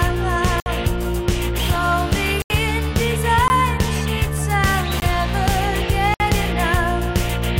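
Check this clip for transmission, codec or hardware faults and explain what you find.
Five blocks of digital silence break up the audio, at 0.60–0.66, 2.42–2.50, 3.48–3.50, 5.00–5.02 and 6.14–6.20 s, lasting 20 to 80 ms. The sound cuts out and back abruptly, and the longer gaps open as short holes. There's no fade or filled-in noise, which separates these from a concealed packet loss.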